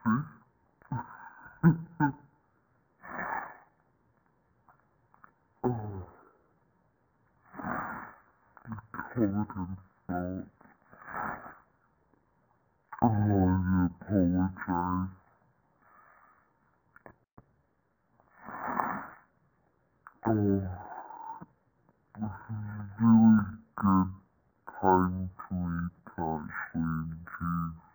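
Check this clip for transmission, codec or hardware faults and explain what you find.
There's one fault, and it runs the whole length of the clip: stereo read as mono. Somewhere along the way the interleaved left and right samples were taken as one long single-channel stream, so every stereo pair gets played back to back. That doubles the sample count, and the result is the audio crawling along at half speed and sitting a full octave (12 semitones) low, with a fainter mirrored copy folded into the top half of the spectrum.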